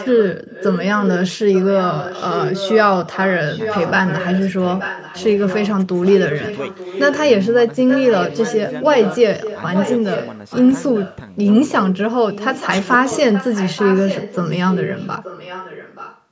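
Echo leak throughout, at 0.0–1.1, 1.28–2.86, 3.05–4.46, 4.62–5.69, 6.05–7.19, 7.88–11.17 and 12.31–16.21 s: a copy of the speech trails by 876 ms, roughly 10 dB quieter, likely a loudspeaker echo the far end's canceller failed to remove.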